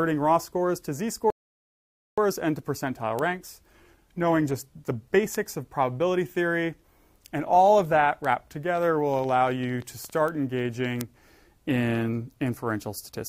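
At 1.30 s the audio drops into a rebuffering stall: playback exhausts its downloaded data and halts until more arrives, leaving silence until 2.18 s. It then resumes exactly where it stopped, so no audio is lost, but about 0.87 s is added.

Single-sample bit error spikes occur at 3.19, 5.35, 8.25, 10.28 and 11.01 s. In each, one flipped bit throws a sample off by a power of two before it snaps back, giving an isolated sharp, broadband tick unrelated to the surrounding sound.

From 8.76 to 10.11 s a train of clicks runs over the audio, roughly fifteen similar pulses at about 9 per second with uneven spacing, peaking at about the level of the signal itself. It is heard as irregular ticking, likely from electrical interference or a struggling interface.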